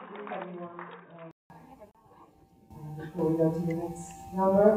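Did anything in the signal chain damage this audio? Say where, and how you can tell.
Yes. From the start to 1.5 s the audio is band-limited, with nothing above 3.8 kHz. It sits roughly 10 dB lower and carries a noise floor about 40 dB below the signal. At 1.5 s there is a 188 ms silence, after which the full band returns. That pattern points to the input stage: the system was likely recording from a poorer device, such as a headset's call profile, before switching back.

At 1.91 s a 34 ms silence cuts into continuous sound, with smeared edges, and the audio resumes exactly where it stopped. This is a gap at a join of encoded pieces, a codec and storage fault. Separately encoded segments were concatenated without trimming, so one segment's padded final frame and the next segment's encoder start-up delay both survive as dead air at the boundary.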